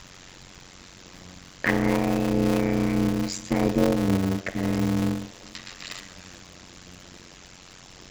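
Throughout the speech, a block size mismatch (padded) fills each short block with silence, so a buzz near 92 Hz sits under everything and the speech runs at about 0.53 times normal speed, which fits 256-sample writes. Unlike a wrong-rate playback, the timbre stays natural.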